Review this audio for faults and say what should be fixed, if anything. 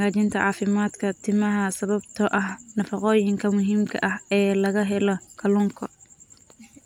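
No faults found; nothing here needs fixing.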